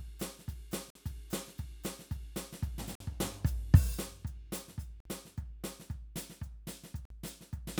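Gap between chunks: the music stops dead for 50 ms at 0.90, 2.95, 5.00 and 7.05 s, every 2.05 s. Silence is left between 2-second chunks, leaving hard-edged silent holes, seen as flat waveform and blank vertical spectrogram strips.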